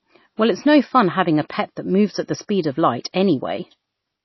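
MP3 compression runs through the whole speech clip: nothing survives above about 5.8 kHz, and weak frequency lines flicker in and out between frames, giving a watery, swirly texture and smeared consonant attacks. That damage likely comes from encoding at roughly 24 kbps.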